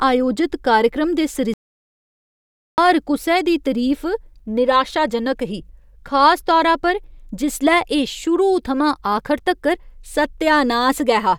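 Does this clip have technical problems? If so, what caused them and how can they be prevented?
Yes: a playback stall silences the speech from 1.54 to 2.78 s, about 1.24 s, likely from the player running dry or being blocked, then resumes mid-flow. Unlike a brief dropout, the gap is long and clean. A larger playback buffer and a non-blocking audio thread would prevent it.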